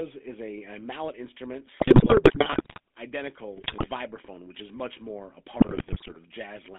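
GSM full-rate codec coding runs through the whole speech clip, limiting it to roughly 250 Hz to 3.5 kHz and giving a plainly audible buzzy, gravelly roughness, which fits a 13 kbps coder that models the vocal tract and drives it with sparse, regularly spaced excitation pulses. GSM bit errors break in at 1.8 to 2.8 s, 3.56 to 3.88 s and 5.54 to 6.17 s as squawks, pops and gargling, consistent with a few percent of bits flipping and corrupting filter, pitch and gain values frame by frame.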